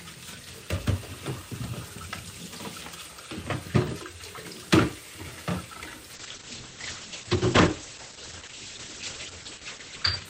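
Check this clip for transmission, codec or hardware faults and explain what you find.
One transmission fault: a call bitrate drop from 6.14 s to the end. The encoder's bit budget collapsed, consistent with roughly 48 down to 9 kbps, so coding coarsened and bandwidth narrowed from 20 kHz to 8 kHz, leaving the sound muffled and rough.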